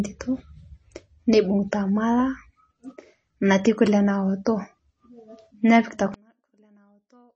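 Throughout, the speech sounds watery and swirly, and nothing is present above 8.4 kHz. This is likely MP3 compression, consistent with a low bitrate near 32 kbps.

At 4.45 s, just after "natii kule", a brief hiss of about 14 ms leads into an attack. This is pre-echo: codec noise spread into the quiet moment before it.

From 6.14 s to the end, the sound drops by about 37 dB, leaving only a faint residue. One channel was likely inverted, cancelling when summed to mono.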